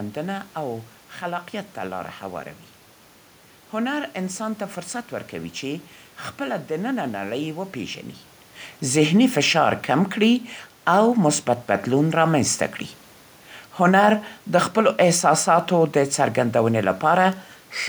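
No technical faults can be heard in this speech clip.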